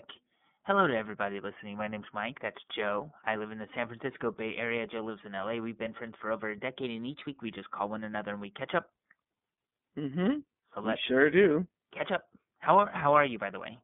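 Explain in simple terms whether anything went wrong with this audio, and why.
Two things went wrong with this speech.

The whole recording has passed through the iLBC codec, a phone-call voice compressor that works in 30 ms slices. Everything above about 3.8 kHz is gone and the deep bass below about 150 Hz is thin, so voices sound boxed-in like a phone line. A plain phone filter would only sound muffled. Here the voice also sounds slightly rough and synthetic, because the compressor rebuilds it from a simplified model of each slice.

From 6.82 to 7.36 s, just after "friends for over a" and before "we just call one", the speech briefly runs about 5.7% fast and jumps up in pitch by almost a semitone, then snaps back. This is likely a drift correction step, where software keeping two clocks in line abruptly changed the playback rate. Unlike a gradual tape-speed wobble, the change starts and ends suddenly, and speed and pitch move together.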